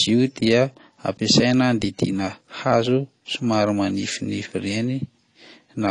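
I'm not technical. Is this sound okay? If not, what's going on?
No, not quite. The whole clip sounds dull and smeared, with a fizzy, warbly edge on the speech and nothing above about 10 kHz. That's most likely AAC compression, squeezed hard enough to strip the top end and roughen the detail.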